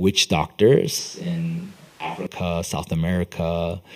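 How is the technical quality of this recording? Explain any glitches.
There is one clear glitch. From 0.98 to 2.27 s the speech abruptly turns roomy and hollow, likely a switch to a distant microphone. A farther microphone picks up more room reflections and less bass. Loudness stays about the same, but room noise rises to roughly 25 dB below the speech. The sound snaps back at 2.27 s.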